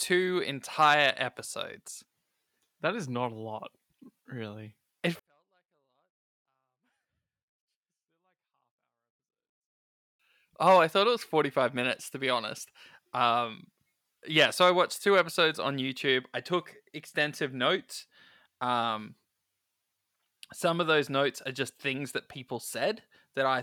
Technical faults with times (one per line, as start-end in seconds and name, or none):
5.19-10.19 24-bit alignment error (too quiet)